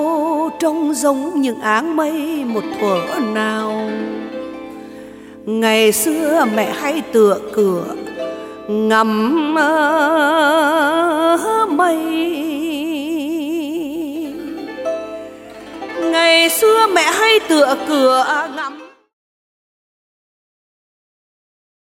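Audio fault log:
No faults heard; the ending fades out smoothly.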